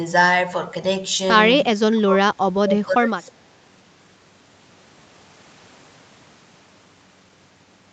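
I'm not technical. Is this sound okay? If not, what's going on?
No. From 1.63 to 3.35 s the voice dips, which is likely speech suppressed in double talk, where both sides speaking at once makes the call turn the talker down.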